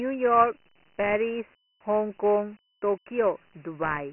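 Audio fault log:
Throughout: Dialogic VOX ADPCM. The speech sounds 4-bit coded, which fits a 24 kbps stream at 6,000 samples a second. Nothing remains above 2.9 kHz. The coarse step sizes cause heavy damage: a gritty hiss rides along with the speech.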